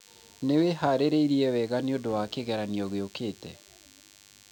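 From start to finish, a DECT cordless phone buzz sits under the speech: a nearby handset or base station sends a radio burst every 10 ms, which the audio circuit rectifies into a thin, rasping 100 Hz buzz, well below the speech. Mains hum sounds smoother and less edgy than this harmonic-rich buzz.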